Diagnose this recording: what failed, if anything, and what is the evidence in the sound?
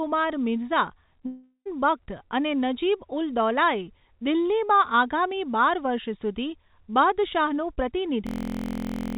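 Network stage: a long network dropout from 1.26 to 1.67 s, likely packet loss, where the speech smears into a fading buzz, then near-silence, and resumes with material missing rather than repeating.

Driver or buffer stage: a system hang loop from 8.27 to 9.17 s, where one 23.2 ms slice repeats exactly as a steady 43 Hz buzz, which fits a 1024-sample ring buffer. Unlike a dropout's fade, the loop keeps full level.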